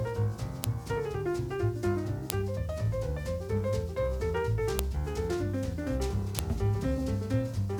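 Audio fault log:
0.64, 2.30, 4.79 and 6.39 s: file header played as audio. Four sharp, loud snaps, each lasting about a millisecond, land regardless of what the sound is doing at the time. Each one marks a point where a new WAV segment was stitched or streamed in with its header still attached, so those few dozen bytes of file metadata get read as sample values. That produces a brief jolt that has nothing to do with the surrounding signal.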